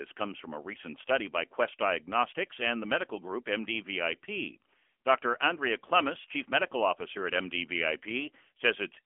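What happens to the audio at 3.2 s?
At 3.2 s you're hearing the AMR narrowband mobile codec, present across the whole clip: nothing above 3.7 kHz, and a buzzy, synthetic edge that fits a low bitrate around 8 kbps.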